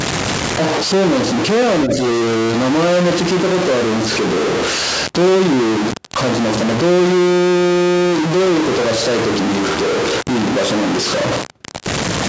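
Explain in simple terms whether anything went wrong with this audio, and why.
Something went wrong in several ways. Throughout the speech there is a constant distortion, and even the pauses carry a gritty noise instead of silence. This points to a stuck bit: one bit of each sample is likely frozen at a fixed value, distorting every sound.

From 1.82 to 1.97 s, a second voice comes through, only slightly quieter than the main talker. This is the other side's voice leaking through, likely because the echo canceller failed to remove the loudspeaker sound from the microphone.

Within that moment, from 1.87 to 1.91 s, the main talker's voice briefly dips in loudness for about 40 ms. This is speech suppressed in double talk. With both sides talking at once, the echo canceller likely could not separate them and turned everything down.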